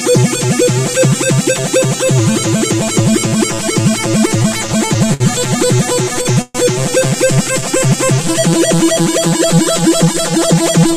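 From start to finish the sound carries channel delay (comb filtering). One channel runs roughly 5 ms behind the other, and when they are summed to mono, shared content cancels at evenly spaced frequencies, starting near 100 Hz. The result is a hollow, phasey colour that never changes. On a spectrogram this shows as fixed dark horizontal bands, regularly spaced up the frequency axis, lasting the whole clip.

Between 4.01 and 5.22 s come repeated stalls (stutter). Packets arrived late, so the receiver ran out of audio twelve times and bridged each gap by continuing the last sound. These fills total 164 ms, about 14% of that stretch, and the longest is 65 ms. A second run follows from 5.76 to 6.57 s, with six stalls filling 174 ms, about 22% of the span. Its longest gap reaches 130 ms, long enough to be heard as a fading hold. No audio is lost, but the sound drags and catches. On a waveform, short repeated or smeared segments interrupt the natural envelope. 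On a spectrogram, brief frozen vertical patches appear where the spectrum stops evolving.

From 9.53 to 10.91 s a jitter buffer speed-up sets in. Too much audio had built up, so the receiver trimmed short pitch-period pieces again and again, about a tenth of a second in all. Playback runs at 106% speed with unchanged pitch, so that passage sounds slightly hurried. On a waveform, events sit closer together than their natural spacing. On a spectrogram, harmonic lines stay at the same height while the time structure is compressed.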